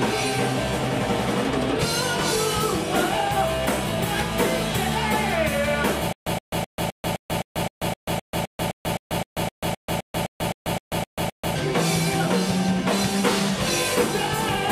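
From 6.13 to 11.56 s you get a stutter with silent gaps: the same 120 ms burst repeats 21 times, each followed by 138 ms of silence, a steady 259 ms cycle. Likely a stalled stream replaying its last fragment each retry, so the audio for that stretch is lost.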